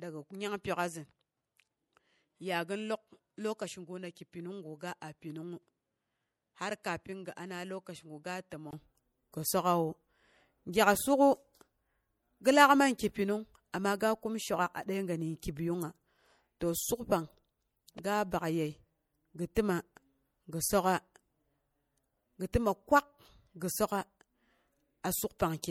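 From the start of the clip to 8.73 s, the speech is band-limited, with nothing above 11.7 kHz. It sits roughly 10 dB lower than what follows and carries its own background noise, about 50 dB below the speech. At 8.73 s a 20 ms silence is heard, and the fuller sound returns with "gi sok'awu". This is an input switched to a poorer device: the system likely recorded the opening through a narrower-band microphone or headset profile, then changed inputs.

Throughout all the speech, plainly audible codec damage gives a watery, swirling quality, and s sounds take on a metallic chirp. This is MP3 compression, which fits a bitrate around 64 kbps. With too few bits, the encoder discards weak frequency components frame by frame, so detail flickers in and out and consonant attacks smear.

At 19.55 s, a sharp onset is preceded by a brief hiss spread over 16 ms, and at 22.53 s another carries a 12 ms smear ahead of it. 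This is pre-echo. Each attack fell late in a codec block, and the quantisation noise sized for the loud part of the block spread back into the quiet moment before the onset, blurring the attack.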